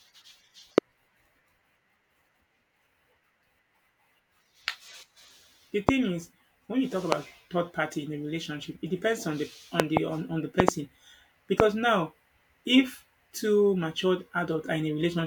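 Loud pops land at 0.78–0.80, 5.89–5.91, 7.12–7.14 (after "is when you talk"), 9.80–9.99 and 10.60–10.71 (both doubled), and 11.60–11.62 s. Each sits about 25 dB above the speech, which continues underneath. A voltage pulse, likely from a switch or static, caused them.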